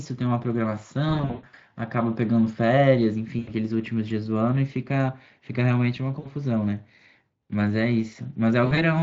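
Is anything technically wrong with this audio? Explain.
Yes. VoIP packet loss concealed by the speech codec affects this speech at 1.09 to 1.59 s, 3.39 to 3.51 s, 6.19 to 6.29 s and 8.65 to 8.82 s. The first burst loses about 320 ms spread over 480 ms, with the longest gap 120 ms. The decoder fills each gap by extending its last pitch and filter at falling gain. The result is a buzzy, smeared tone that fades, and the voice stays thin briefly after real packets resume.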